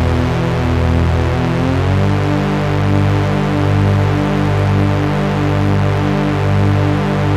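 Mains buzz runs through the whole of this recording of sounds, a steady raspy drone sitting only about 10 dB below the sound itself. It is tied to a 50 Hz supply: sharp switching spikes from something like a dimmer, a rectifier or an unshielded cable get into the signal path twice per mains cycle. Those spikes carry a dense ladder of 50 Hz harmonics reaching up into the kilohertz range, which gives the buzz its edge rather than a smooth hum.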